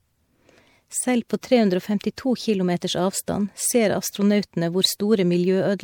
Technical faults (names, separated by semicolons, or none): generation loss